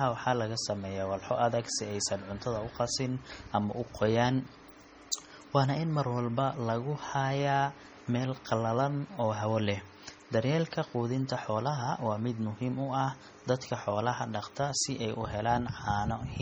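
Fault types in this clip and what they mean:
MP3 compression: Heavy watery, swirling damage runs through the whole speech clip, with weak detail flickering in and out and no content above 20.9 kHz. The texture points to a low bitrate near 32 kbps as the likely cause. Unlike plain low-pass filtering, the degradation shifts from moment to moment.
pre-echo: At 5.12 s, a short hiss of about 12 ms runs just ahead of the sharp onset before "waana in mar walba", softening the attack. The codec's block spread its noise backwards in time. Unlike a click or reverb tail, the smear comes before the sound, not after.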